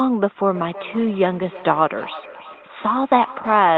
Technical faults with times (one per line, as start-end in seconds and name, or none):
0.49-3.78 feedback echo between two devices